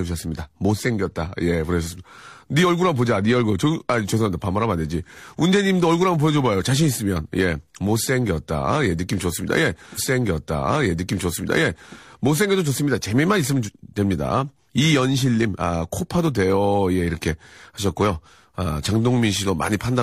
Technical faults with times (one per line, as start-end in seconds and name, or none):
9.94-11.94 stream segment repeated